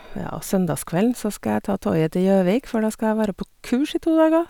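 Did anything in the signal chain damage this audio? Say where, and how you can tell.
No, nothing damaged this audio.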